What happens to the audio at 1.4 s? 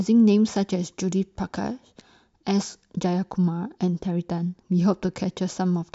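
Nothing goes wrong at 1.4 s; the speech carries on intact through that moment, with no dropout, click or distortion.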